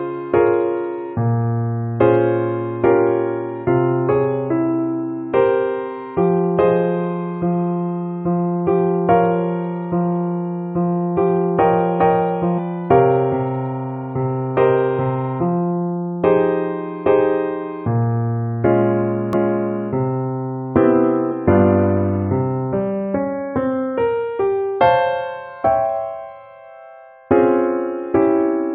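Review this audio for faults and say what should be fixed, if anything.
Damaged data in a compressed stream at 12.57, 19.33 and 21.31 s: corrupted bytes make the decoder misread frames and lose sync, causing brief blips. Verify file integrity with checksums and use error-checked transfer or storage.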